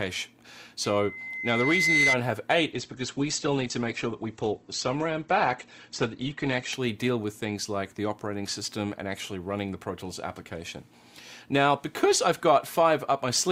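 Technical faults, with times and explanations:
0.84–2.19 s, loudspeaker feedback squeal: a 2 kHz tone swells over roughly a second to a few dB above the sound, seen as one bright horizontal spectrogram line.
2.72–6.72 s, adaptive stream at a lower bitrate: treble abruptly vanishes above 8.2 kHz as codec artefacts rise; the spectrogram shows a sudden flat ceiling, no gap.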